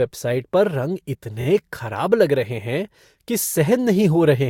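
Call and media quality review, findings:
Speech stutters at 1.40–1.45 s: a short stretch replays twice. Repeated frames between encoder and decoder, a run of compressed frames resent or rewritten and played again. Consistent with 14.7 ms frames. Adds 48 ms.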